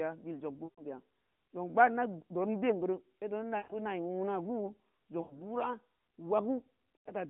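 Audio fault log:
0.64–0.84 s, 3.58–3.74 s, 5.22–5.55 s, 6.97–7.12 s: lost AMR speech frames. In each gap the AMR-NB decoder repeats its last good pitch and vocal-tract settings at falling gain, so the sound smears and fades toward silence, then resumes weak or rough. The concealed stretches run about 140, 120, 80 and 100 ms. The longest fits seven lost 20 ms frames. On a spectrogram the harmonics stretch flat and dim inside the 150 Hz–3.5 kHz line band. The waveform's envelope sags.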